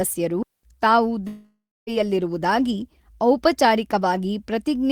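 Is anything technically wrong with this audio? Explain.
Yes, there are two separate dropouts in this speech clip.

From 0.43 to 0.63 s there is a digital wireless dropout. The receiver lost too much data and muted for about 208 ms. It is a clean hole of near silence, with a very short fade and no noise burst on either side.

From 1.27 to 1.90 s a long network dropout is the likely cause. About 600 ms of audio never arrives. The last sound is stretched into a fading buzz or hiss, then roughly 270 ms of silence follows. The audio resumes with that stretch gone.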